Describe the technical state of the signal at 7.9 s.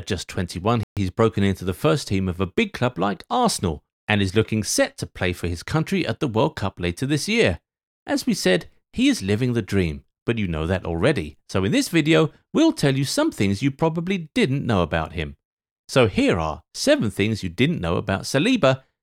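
At 7.9 s the speech signal is intact, with no technical fault audible at that moment.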